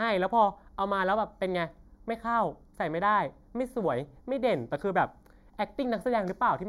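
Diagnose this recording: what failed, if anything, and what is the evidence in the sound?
The speech carries channel delay (comb filtering) from start to finish: it sounds hollow and phasey, with a dulled upper presence. The fault sits at the mono summing stage, likely in the driver or buffer path, where one channel arrives a fraction of a millisecond late, about 0.2 ms. Summed with its twin, the shared content cancels at evenly spaced frequencies, the first notch around 3 kHz. A spectrogram shows fixed dark horizontal bands that never move with the speech.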